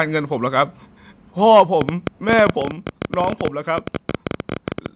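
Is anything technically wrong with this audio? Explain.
Yes, there are three kinds of fault, all sitting on a narrowband call path that cuts everything above 4 kHz.

Microphone overload hits at 1.51 to 1.62 s and again at 2.32 to 2.5 s. The peaks run about 4 dB and about 3 dB past the converter's limit, likely because the mic input gain was set too hot. The tops get sliced flat: around 7 percent of samples in the first burst, under 1 percent in the second. That gives the loudest moments a harsh, crackly edge.

Microphone volume stepped down at 1.6 s by about 3 dB and at 2.61 s by about 5 dB. Each drop comes during or just after a clipped stretch, which points to the call software likely reacting to the overload by pulling the device's input gain down in one jump. You hear the whole level, background included, sink abruptly.

A train of clicks runs from 1.81 s to the end, at roughly 14 per second with uneven spacing. 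The clicks peak around 15 dB above the signal. They're likely from electrical interference or a faulty connection, and they come through as a persistent ticking over the sound, gaps included.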